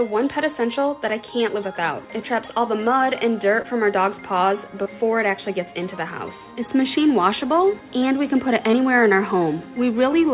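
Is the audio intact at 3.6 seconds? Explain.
No. From 3.62 to 3.66 s, short concealed packet loss: about 20 ms arrived too late, and the receiver extended the preceding sound, leaving a brief smear.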